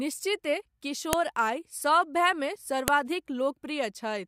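File header played as audio at 1.13 s and 2.88 s in this speech recording: joined WAV pieces kept their headers, whose bytes play as sharp, loud clicks.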